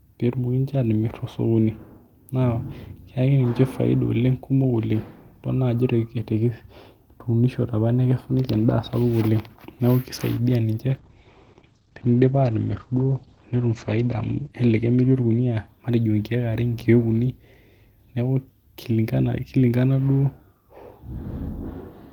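Call bitrate drop, 10.9 to 15.83 s: the bit-starved encoder renders speech coarse and watery and cuts the highs from 20 kHz to 8 kHz, which fits a fall from 32 to 11 kbps.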